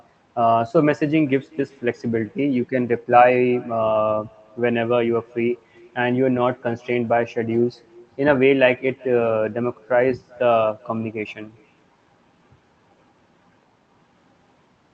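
Echo with no canceller runs through the whole speech clip: each phrase returns roughly 0.4 s later as a faint copy, about 28 dB down, because the far end's loudspeaker feeds its microphone uncancelled. The audio is limited to about 8 kHz, which fits a low-bitrate call codec.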